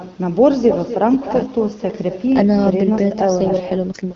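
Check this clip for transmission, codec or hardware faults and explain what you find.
Two faults are present: an uncancelled echo and an AMR rate drop.

Echo with no canceller runs through the whole clip. Every phrase returns about a third of a second later, roughly 10 dB quieter and thinner. The far end's loudspeaker feeds its microphone, and nothing subtracts that signal before it travels back.

An AMR rate drop starts at 3.30 s and lasts to the end. The sound turns rougher and more synthetic, with no gap and no loss of bandwidth. The light AMR-WB coding before this point gets coarser, which points to a drop from 12.65 to 8.85 kbit/s on a weak radio link.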